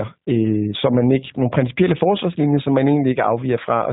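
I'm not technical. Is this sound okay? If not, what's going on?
No. The speech has passed through the G.729 codec from start to finish, and the damage is plain to hear. This is a phone-call codec that keeps very little of the real sound. It rebuilds the speech from a rough model of the mouth and throat plus a few pulses for each tiny slice of time. Everything above about 4 kHz is missing, so the speech sounds muffled and boxy. It also comes across as slightly rough and artificial.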